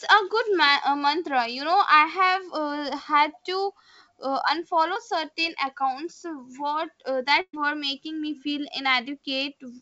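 This is a speech clip carried over a call link, with nothing above 8 kHz. At 4.94 to 4.97 s there is short concealed packet loss. About 20 ms of audio never arrived in time. The receiver filled roughly 14 ms by extending the preceding sound, then blended back. It is heard as a brief smear or wobble. At 7.41 to 7.55 s a burst of packet loss removes about 120 ms. The decoder carries the last sound forward for about 118 ms, fading it as the gap lengthens, with about 50 ms of near-silence. The speech then resumes with that stretch missing.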